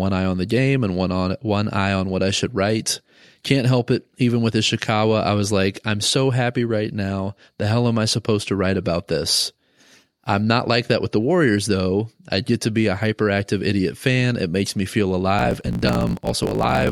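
From 15.37 s, just after "makes me feel", and running to the end of the clip at 16.91 s, the speech shows a block size mismatch with truncation. One stage hands over longer blocks than the next stage accepts, so the tail of every block is discarded. The regular cuts produce a 50 Hz buzz, and the speech runs about 1.16 times fast while keeping its timbre. The pattern fits 1024-sample blocks being cut short.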